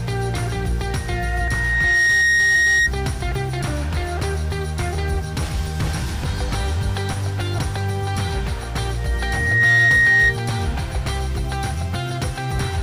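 A single steady tone at 1.9 kHz appears at 0.89 s and swells over roughly a second into a piercing squeal, a few dB above the rest of the sound, before dying away at 2.91 s. This is loudspeaker feedback squeal: a microphone is hearing the loudspeaker it drives, and at 1.9 kHz the loop's gain goes above one, so that tone grows on itself.

While the squeal is still sounding, a join at 2.54 s marks a jump forward of around a fifth of a second. Another join at 7.57 s skips a shorter stretch, and one at 12.58 s again drops roughly a fifth of a second. These are compressed frames skipped: runs of several coded frames were missing or rejected by the decoder, so playback leaps ahead.

The feedback returns at 8.98 s on the same 1.9 kHz tone. It builds faster this time, in under a second, and rises louder, to about 10 dB over the program, before stopping at 10.36 s.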